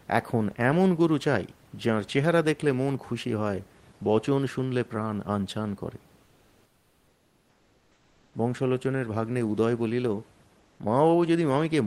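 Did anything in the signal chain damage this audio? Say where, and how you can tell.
Yes. Comfort noise in place of the background fills 6.25 to 8.29 s and 10.63 to 10.75 s. The room noise turns flat and featureless, about 4 dB and about 2 dB quieter. The codec likely stopped sending in pauses (Opus DTX), and the receiver synthesised noise.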